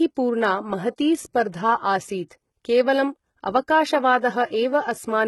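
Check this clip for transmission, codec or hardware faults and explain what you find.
One codec fault is audible across the whole speech clip. Throughout, the treble sounds synthetic and gritty, with s sounds turning metallic or lispy and nothing above 11.8 kHz. This is likely HE-AAC compression, where only the lower spectrum is coded and the top is rebuilt by copying bands upward, so the harmonics no longer line up. The heavy damage points to a very low bitrate, around 16 kbps.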